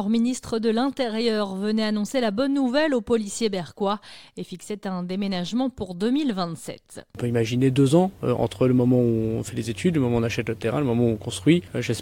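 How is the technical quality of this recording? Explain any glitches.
No technical glitches can be heard anywhere in the recording, and the signal stays continuous and stable throughout.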